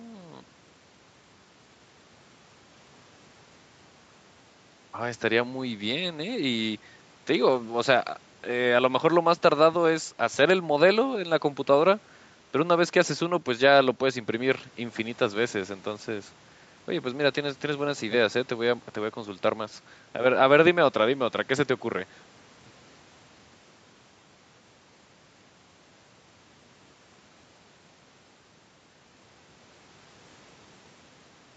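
Speech, with no technical faults to be heard.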